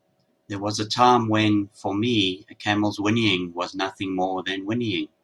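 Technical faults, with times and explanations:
No technical faults can be heard in this speech.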